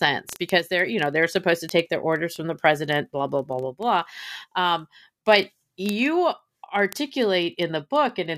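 Word clock ticks run through the speech from 0.13 s to 8.36 s, at a steady rate of roughly one every 30 ms, some three hundred in all. The digital link is being read by a device on its own clock, not locked to the sender's. The two clocks differ by roughly 700 ppm, so they slip past each other continually, and at each slip a single sample is dropped or repeated, leaving a sharp tick in the audio.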